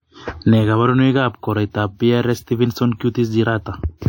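Throughout the speech, the top end stops sharply at about 16.7 kHz, and the two layers of coding artefacts sit on top of each other, the artefacts of both codecs heard together. The likely cause is transcoding between lossy codecs. The sound points to an MP3 encode at around 64 kbit/s that was re-encoded to WMA at a similar rate. The second encoder spent its bits reproducing the first encoder's damage, added its own artefacts, and kept the lower bandwidth limit from the chain.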